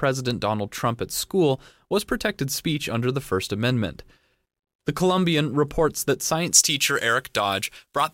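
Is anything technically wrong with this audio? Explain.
Yes. From 6.51 s, right after "reports that", to the end of the clip at 8.13 s, the speech suddenly turns thin, bright and hissy, with sibilants spitting forward. This is pre-emphasis left on: the treble was lifted for transmission and the matching de-emphasis was never applied, leaving the top end about 11 dB louder at 10 kHz than at 1 kHz. The shape of that lift fits a J.17 emphasis curve.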